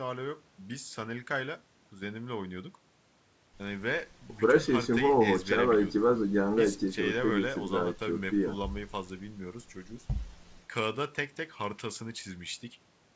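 No faults can be heard anywhere in this speech.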